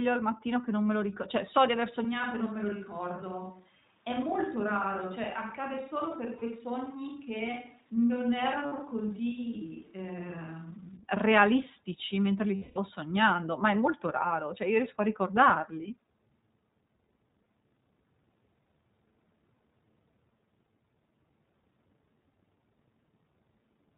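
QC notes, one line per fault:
Throughout: iLBC codec. Nothing above 4 kHz, and speech sounds slightly rough and synthetic. The coding damage is plainly audible and fits 15.2 kbps with 20 ms frames.
2.05 to 10.96 s: switch to a distant microphone. The sound turns suddenly roomy and hollow, with less bass, a level about 5 dB lower and faint room noise. Likely a failed close microphone.
6.38 to 6.44 s, 8.66 to 8.73 s, 12.56 to 12.78 s: lost iLBC frames. Gaps of 40, 60 and 200 ms become held, buzzy vowel-like sounds. The decoder repeats the last pitch cycle, then recovers quickly.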